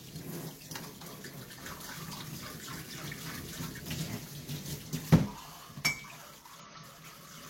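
Damaged data in a compressed stream hits at 3.77 to 3.82 s and again at 6.60 to 6.66 s. Corrupted bytes make the decoder misread those frames and hunt for the next valid header, leaving a brief chirp or blip, about 50 and 64 ms long, over the sounds.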